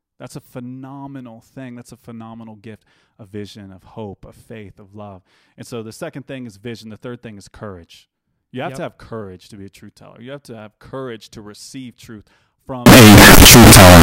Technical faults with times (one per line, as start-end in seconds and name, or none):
12.86-14.03 signed and unsigned mixed up